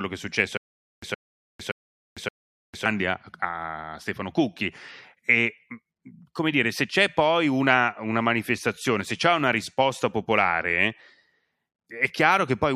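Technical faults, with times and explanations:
0.57–2.86 s, stutter with silent gaps: a 119 ms fragment plays four times, each followed by 452 ms of digital silence on a steady 571 ms cycle, likely a stalled stream replaying its last buffer. Unlike random dropouts, the identical burst recurs while the intervening audio is lost.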